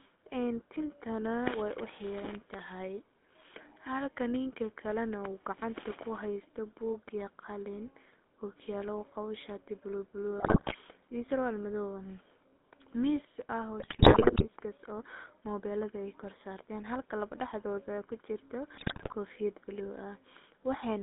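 Throughout, the GSM full-rate codec confines speech to roughly 200 Hz–3.6 kHz, fitting a 13 kbps stream. Pulse-driven vocal-tract modelling leaves an audible buzzy, gravelly roughness. GSM bit errors at 10.38–10.75 s, 13.80–14.46 s and 18.74–19.15 s corrupt decoder parameters, producing squawks, pops and gargling bursts.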